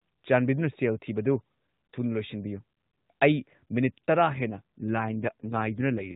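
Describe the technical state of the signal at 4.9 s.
AMR rate drop, from 4.40 s to the end: speech turns rougher and more synthetic, consistent with the mobile codec dropping from 12.2 to 5.9 kbps to protect a weak link.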